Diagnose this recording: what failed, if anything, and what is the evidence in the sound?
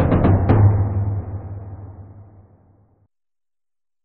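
Nothing failed; no fault is audible in the recording.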